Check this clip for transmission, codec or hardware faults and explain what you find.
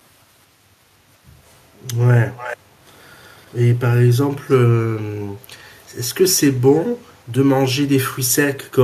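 Two faults are audible in the speech: a brief dip in the background caused by echo-canceller gating, and three short echo leaks.

Background gated by the echo canceller, 0.6 to 1.01 s. The room sound dips, at its deepest by about 6 dB, for roughly a fifth of a second in total. The loudspeaker was playing, and its echo canceller pulled the microphone down hard to suppress it. The background sags, then recovers once the canceller releases.

Echo leak, at 2.37 to 2.57 s, 3.23 to 3.45 s, and 4.49 to 4.57 s. A delayed copy of the speech trails it by 357 ms each time. The first scrap is the clearest, around 15 dB below the speech. The third sits near 30 dB down, and the second is barely there at around 40 dB down. The likely cause is a loudspeaker call where the echo canceller missed part of what its microphone picked up and sent that residue back.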